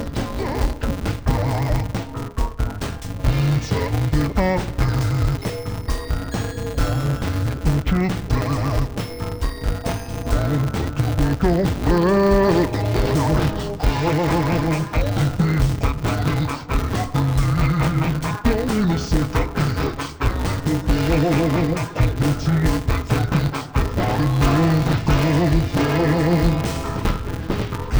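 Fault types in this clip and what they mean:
Interleaved audio read as planar: blocks of alternating left and right samples are split wrongly, with the first half of each block taken as left and the second half as right. Each channel then holds the sound at half speed, chopped into short segments. The blocks here are about 5.33 ms, which fits a 256-sample block, so the audio sounds dull and robotic throughout, with a buzz at about 188 Hz and no clear octave drop.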